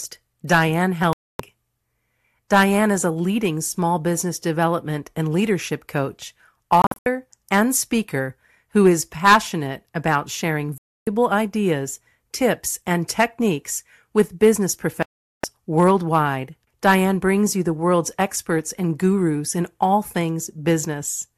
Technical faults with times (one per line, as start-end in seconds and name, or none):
1.13-1.40 digital broadcast dropout
6.82-7.06 digital broadcast dropout
10.78-11.07 digital broadcast dropout
15.03-15.44 digital broadcast dropout